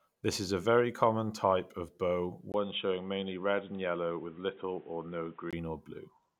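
Right after "common type of bow", at 2.52 s, there's a 20 ms gap, then the speech goes dull and boxy with nothing above 3.8 kHz, plus a faint new noise floor, though the level holds steady. That's likely the input switched to a poorer device, lasting until 5.53 s.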